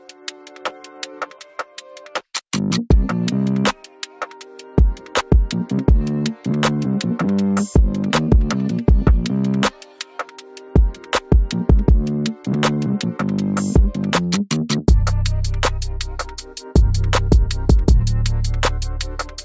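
Nothing in the recording stood out as a problem on listening.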